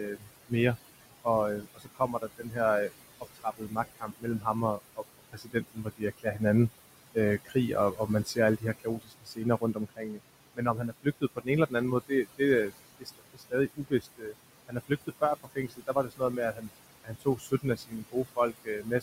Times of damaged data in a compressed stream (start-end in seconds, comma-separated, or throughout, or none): none